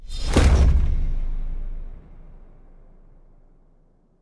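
Aliasing runs through the whole clip. The audio appears to have been resampled from 48 kHz down to around 22 kHz with no low-pass filter in front, so content above the new fold point at 11 kHz was not removed. It reflects back down into the band as tones unrelated to the original, sitting around 30 dB below the signal. High-frequency detail turns gritty and metallic, and the spectrum stays dense right up to the 11 kHz edge instead of rolling off.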